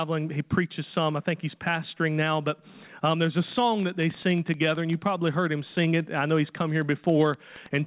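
A train of clicks runs from 3.80 s to the end of the audio, about nine clicks per second at an uneven spacing. Their peaks stand roughly 5 dB above the sound, so they tick through pauses as well. The likely cause is interference from nearby equipment or a faulty connection or power supply. On a waveform they show as sharp, similar spikes above the envelope. A spectrogram shows thin vertical streaks reaching the 4 kHz ceiling of the call path.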